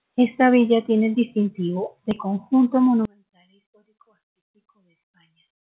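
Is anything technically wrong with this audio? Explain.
Yes. From 3.05 s to the end, the speech drops by about 33 dB to a faint trace. The likely cause is one channel inverted: with its polarity reversed, the content shared by both channels cancels in the mono sum. The waveform collapses to near-flat, and the spectrogram goes almost blank below the call path's 4 kHz ceiling.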